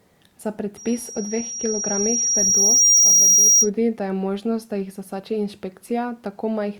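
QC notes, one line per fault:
0.77–3.70 s: loudspeaker feedback squeal, a single 5.7 kHz tone swelling over about two seconds to about 10 dB above the speech. The microphone is picking up its own loudspeaker, and at that frequency the loop gain exceeds one, so the tone feeds itself.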